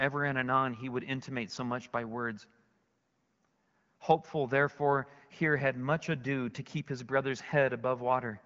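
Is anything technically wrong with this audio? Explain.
No, nothing in this speech recording points to a technical fault. It has been carried over an AMR wideband (HD Voice) link at 12.65 kbit/s, where the speech stays clear and the coding leaves only a light mark on the sound.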